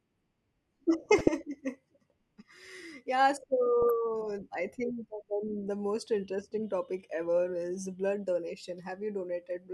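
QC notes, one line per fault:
1.06–1.28 s, 3.82–3.90 s, 7.13–7.25 s: DAB burbling. Residual bit errors corrupt MP2 sub-band samples and scale factors, so single bands jump briefly, giving short noise blips over the speech.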